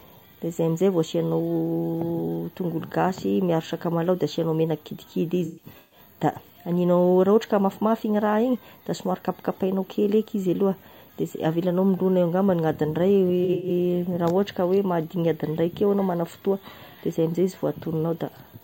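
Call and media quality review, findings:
AAC frame loss with concealment, 5.45–5.99 s. Smeared, phasey patches over about 470 ms, roughly 320 ms of it missing. Longest gap about 150 ms. Decoder repeating last good spectrum with scrambled phase. Frames lost ahead of AAC decoder.

Same fault, 13.44–13.70 s. Shorter smear, about 170 ms missing across 256 ms. Longest run about 100 ms. Noisy, hollow texture. Same concealment path.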